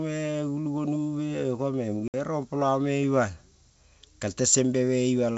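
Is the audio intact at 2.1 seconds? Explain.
No. Packet loss on an ADPCM call cuts the speech from 2.08 to 2.15 s. About 60 ms of audio drops out, roughly three packets' worth. The gap is filled with silence, so it has hard edges. The G.722 decoder's predictor and step size then no longer match the sender's. So the speech comes back with some distortion. It settles again within some tens of milliseconds.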